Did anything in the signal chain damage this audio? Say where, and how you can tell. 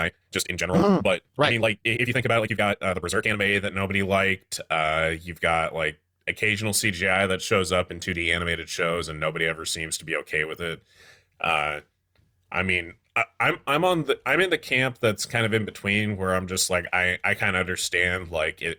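Yes. From the start to 3.36 s the speech races by, rushed, at about 1.85 times normal pace while its pitch stays put, then settles abruptly. This is a time-stretched section, likely from software compressing the passage by dropping short slices.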